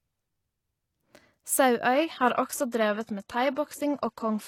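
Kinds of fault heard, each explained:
Adaptive stream at a lower bitrate: from 1.93 s to the end of the clip, the speech abruptly loses its top end, with nothing left above 12.3 kHz, and the treble that remains takes on a synthetic, reconstructed sheen with more codec artefacts. There is no gap at the switch. The player seems to have stepped down to a lower-bitrate rendition mid-stream, and the sound fits a change from roughly 96 kbit/s AAC to a 16 kbit/s HE-AAC stream.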